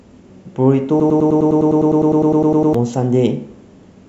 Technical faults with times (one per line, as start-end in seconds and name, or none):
0.11-4.08 clock slip clicks
1.00-2.74 broken-record loop